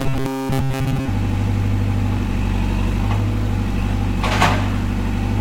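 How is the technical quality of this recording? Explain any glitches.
The opening second has a glitch. From 0.01 to 1.08 s there is robotic sound from repeated short buffers. Most of that stretch is a rigid, metallic buzz at 134 Hz. It likely comes from a roughly 7.5 ms block being replayed while new audio was skipped.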